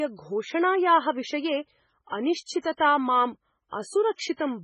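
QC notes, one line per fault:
Throughout, MP3 compression: a starved encoder, likely MP3 at a very low rate consistent with about 16 kbps, drops everything above 10.5 kHz and zeroes weak frequency lines that flicker between frames. The speech sounds dull, watery and swirly, with metallic chirps on sibilants.
2.59 to 4.19 s, pre-echo: at 2.59 to 2.64 s, 2.76 to 2.80 s and 4.13 to 4.19 s, quantisation noise sized for a sharp attack spreads back through its transform block, 33 to 59 ms ahead of the onset. Each attack is preceded by brief hiss and lands softened and smeared.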